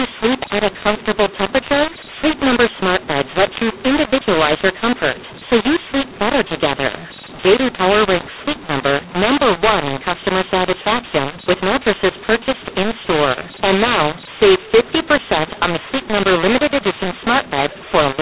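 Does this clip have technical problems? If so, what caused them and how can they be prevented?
Yes. The whole clip suffers from mu-law and A-law being mixed up. The speech was encoded as G.711 mu-law but decoded as A-law. The two laws map the same 8-bit codes to different levels. Some samples come out too loud, others too quiet. The quietest codes land well above silence. The speech sounds harsh and distorted, and the pauses fill with noise. The telephone band itself, limited to 4 kHz, sounds as expected. To prevent it, make sure the decoder uses the same G.711 law as the encoder.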